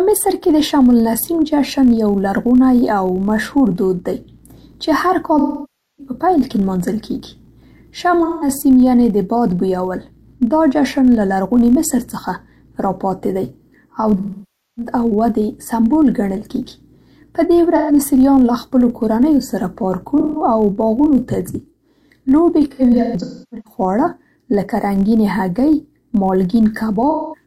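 Throughout the speech a filter restarted on every block leaves a faint tick train, a buzz near 43.1 Hz that rises and falls with the speech level. The filter begins each block from zero state, so a small transient lands at every boundary, a spacing that fits 1024-sample blocks at 44.1 kHz. A waveform shows regularly spaced spikes. A spectrogram shows thin vertical lines at even intervals, brighter in louder passages.

AAC frame loss with concealment then strikes seven times, at 5.38–6.12 s, 8.24–8.48 s, 14.18–14.92 s, 17.76–17.92 s, 20.20–20.43 s, 22.70–23.79 s and 27.10–27.44 s. With data missing, the decoder rebuilds sound from the last good spectrum. The 0.13–0.21 s gaps come out smeared and phasey. The 0.6 s losses at 5.38 s and 14.18 s fade toward silence and swell back. At 22.70 s about 0.64 s of loss is scattered across nearly a second, its longest run roughly 0.3 s. Spectrograms show blurred, frozen bands, and waveforms show tapering envelopes.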